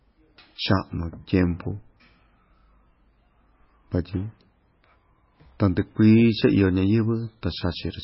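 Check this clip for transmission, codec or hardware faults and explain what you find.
One fault runs through the whole clip. From start to finish the speech sounds watery and swirly, with metallic chirps on s sounds and nothing above 5.6 kHz. This is likely heavy MP3 compression at a very low bitrate, around 17 kbps. Short of bits, the encoder cuts off the treble and lets weak frequency components flicker on and off between frames.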